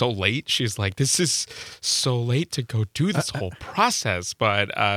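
From 1.66 to 2.90 s a block size mismatch (truncated) discards each block's tail, adding a 100 Hz buzz with no audible speed change, seen as evenly spaced vertical seams every 10 ms.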